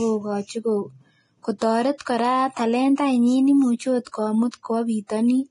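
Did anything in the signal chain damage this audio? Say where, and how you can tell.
Yes. The codec stage has damaged the whole clip: the treble is hissy and grainy, tones sound roughened, and nothing remains above 10.6 kHz. This is heavy Vorbis compression, likely at a low bitrate near 28 kbps, where coarse residue quantisation turns high-frequency detail into noise.

Pre-echo from the same codec appears as brief hiss just ahead of sharp onsets at 1.58–1.62, 1.98–2.00, 2.96–2.98, 4.05–4.07 and 4.51–4.53 s, each lasting 21 to 32 ms. Quantisation noise sized for each attack spreads across its transform block into the quiet moment before it.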